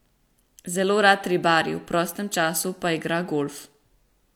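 No technical faults are audible anywhere in this recording.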